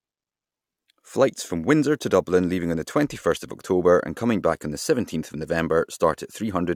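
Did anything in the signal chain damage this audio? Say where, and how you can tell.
No, nothing in the signal chain has left an audible mark on this speech recording, from capture through to playback.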